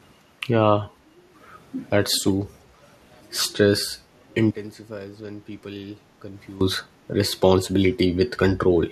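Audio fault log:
2.14–2.33 s, echo leak: a faint, brief delayed copy of the speech appears about 345 ms after the original, well below the direct speech. The likely cause is a far-end loudspeaker feeding its microphone, with the echo canceller failing to remove that pickup before sending it back.
4.51–6.61 s, one channel inverted: the speech drops by about 19 dB, leaving a weak remnant for roughly two seconds. This is likely one stereo channel with reversed polarity, so the centred speech common to both channels cancels when summed to mono.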